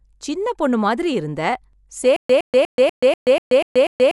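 Dolby Digital compression runs through this speech clip: the sound is dull, with nothing above 11.5 kHz and rough, fluttering noise around tones, likely from a low-bitrate encode (around 64 kbps) that starves many frequency lines of bits. A stutter with silent gaps begins at 2.16 s and lasts to the end: a 113 ms burst repeats eight times, once every 244 ms, separated by 131 ms of digital silence. A stalled player likely kept replaying its last fragment and then running empty, so the audio that should have followed is lost.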